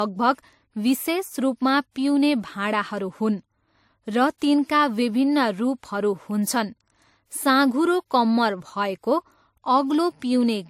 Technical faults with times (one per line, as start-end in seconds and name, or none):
0.00-10.69 transcoding between lossy codecs